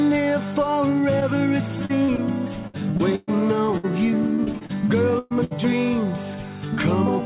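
Short concealed packet loss at 1.20 to 1.23 s: about 20 ms of audio never arrived at the decoder in time, and the receiver covered the hole by extending the preceding sound for around 13 ms before blending back into the real signal. The patch is heard as a quick smear or wobble in the band-limited sound, which stops at 4 kHz and fits a narrowband G.711 call path.

Repeated packet loss (robotic sound) from 1.85 to 5.53 s: over this stretch, losses recur more than a dozen times, and each gap is bridged by continuing the last sound before the next dropout arrives. The longest hole runs about 122 ms, and roughly a sixth of the span is concealment rather than received audio. The result is choppy, robotic-sounding audio with fragments missing throughout those nearly four seconds.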